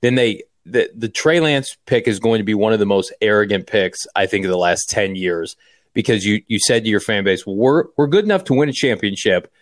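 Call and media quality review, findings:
Nothing to flag on this speech clip, no faults heard anywhere in it.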